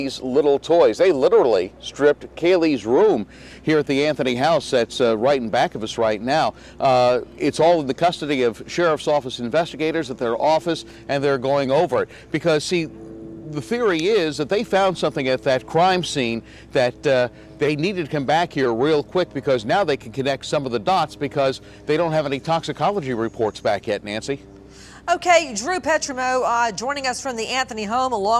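No technical faults can be heard in this audio.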